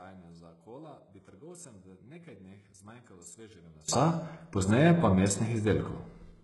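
From 0 to 3.88 s, summed to mono, the speech nearly vanishes, dropping about 25 dB to a faint residue. The likely cause is one channel inverted, so the shared centre cancels. A waveform shows tiny amplitude until 3.88 s, then jumps to full level.

Across the whole clip, the treble is gritty and lispy, with s sounds turned metallic. This points to HE-AAC compression, likely at a very low bitrate around 12 kbps, with treble rebuilt by spectral band replication. A spectrogram shows copied, blocky upper bands stopping sharply at 11.5 kHz.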